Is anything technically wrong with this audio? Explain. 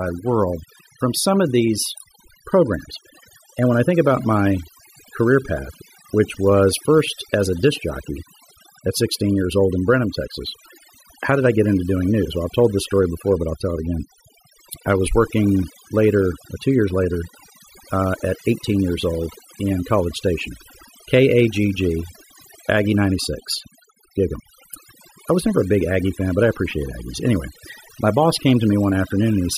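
Yes. Throughout the speech, overdone noise removal is audible: aggressive suppression mutes bands near the noise estimate, leaving near-silent gaps with twinkling specks.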